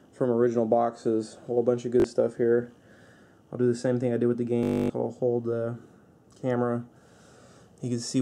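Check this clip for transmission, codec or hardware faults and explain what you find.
The clip has two Bluetooth stutter events. At 2.00 s, about 41 ms repeats briefly, consistent with two dropped packets. At 4.63 to 4.90 s, 264 ms of lost data is replaced by a repeating buffer slice, producing a machine-gun buzz before the sound resumes further along.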